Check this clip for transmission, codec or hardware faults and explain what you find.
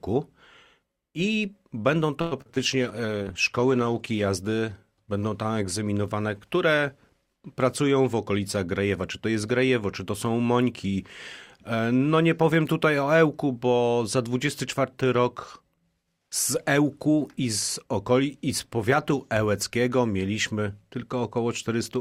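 Four faults show up, all clustered in two places: a burst of network trouble from about 2.2 to 4.3 s, and a brief timing correction near 8 s.

Repeated packet loss (robotic sound), 2.21 to 2.58 s: the connection dropped or delayed packets four times in quick succession. The receiver papered over each hole by extending the last good sound, covering about 168 ms, while roughly 120 ms simply went missing; the longest single gap was 102 ms. Nearly half of this stretch is concealment, so the audio turns choppy, with pieces clipped out.

Call bitrate drop, 2.59 to 4.34 s: right after the losses, the bandwidth estimate collapsed and the encoder was pushed from 64 kbps down to 15 kbps, staying at the floor for about 1.6 s. At that rate the codec quantises far more coarsely and trims the upper frequencies, so the sound goes dull, rough and watery until the bitrate climbs back.

Jitter buffer slow-down, 3.01 to 3.35 s: with its reserve running low, the receiver stretched playback by repeating short stretches of the waveform, adding 59 ms. 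Playback runs at about 85% speed with the pitch unchanged, so sounds in this window feel drawn out, layered on top of the low-bitrate muffling.

Jitter buffer speed-up, 8.06 to 8.88 s: here the buffer had accumulated more audio than its target, so the receiver trimmed small slices, about 70 ms in total, to bring the delay down. The audio plays at around 108% speed at the same pitch, giving a brief hurried, slightly rushed quality over this stretch.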